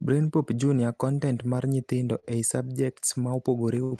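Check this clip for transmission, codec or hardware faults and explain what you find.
Two short stalls from a late packet. At 2.19–2.25 s, just after "mar nyithindo", and again at 3.84–3.93 s, a packet arrived late and the jitter buffer ran dry. The receiver stretched the last sound to bridge the gap, by about 34 ms and then about 77 ms, and resumed where it left off, so nothing is lost. What you hear is a sound held unnaturally long with a faint buzzy dip. The speech runs through an Opus call path with bandwidth reaching about 12 kHz.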